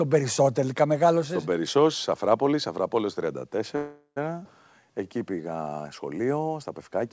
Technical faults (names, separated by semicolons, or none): call audio freeze; skip ahead; jitter buffer slow-down